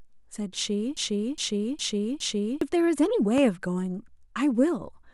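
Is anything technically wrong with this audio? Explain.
Yes, two faults. From 0.97 to 2.61 s a broken-record loop repeats one 412 ms speech fragment four times, likely a stalled stream resending its last buffer; the waveform shows identical repeating blocks. From 3.38 to 3.41 s a loud pop, likely a voltage glitch, stands about 10 dB above the speech as a single spike and full-band vertical line.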